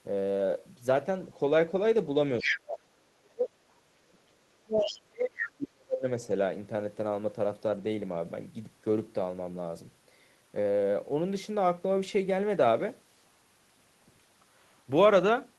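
A speech clip with echo-canceller trouble on a speakerphone-style call. At 2.39 to 2.59 s and again at 4.81 to 4.99 s the other side's voice is leaking through: short scraps of a second talker, the first at roughly the same level as the main speech, the second about 10 dB lower. The likely cause is loudspeaker sound reaching the microphone and not being fully removed. On a spectrogram these show as brief harmonic patches that do not follow the main talker's pitch track. Overlapping them, the main talker's speech is suppressed in double talk from 2.42 to 3.58 s and from 4.01 to 6.05 s, with dips of around 35 dB, about a second in the first stretch and two in the second. The speech level drops, most likely because the canceller turned everything down while both sides spoke.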